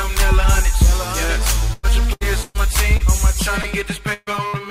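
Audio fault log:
1.73–3.02 s, repeated packet loss (robotic sound): five separate holes in the stream, about 0.32 s of audio missing in total, with the longest at 118 ms. Roughly a quarter of this stretch is patched-over guesswork, which gives it that choppy quality.
3.62–3.66 s, short concealed packet loss: about 20 ms never arrived, and the decoder bridged it by extending the preceding sound before easing back into the real signal. You get a tiny smear or wobble.
4.14–4.29 s and 4.48–4.55 s, burst of packet loss: back-to-back losses of about 140 ms and then about 60 ms. Each time the receiver stretches the last bit of sound and fades it, so there's a held buzz or fading hiss, then a jump ahead. The first gap drops to about 30 ms of silence before the audio returns.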